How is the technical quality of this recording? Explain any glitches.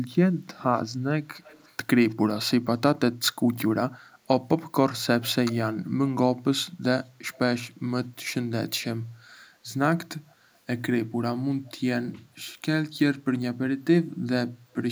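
The recording has one recurring fault, an echo leak. Faint delayed copies of the speech appear at 1.35–1.75 s, 2.09–2.15 s, 5.22–5.34 s, 7.34–7.38 s and 10.3–10.35 s, trailing by 237 ms and roughly 30 to 40 dB below the speech. This is likely a far-end loudspeaker whose echo canceller let residual pickup through in short scraps.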